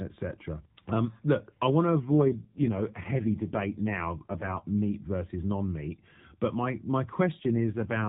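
From 1.98 to 4.62 s, and again from 7.40 s to the end, there's an AMR rate drop. The voice gets rougher and more synthetic, with the same narrow band and no gap, which fits the codec stepping down from 12.2 to 4.75 kbps.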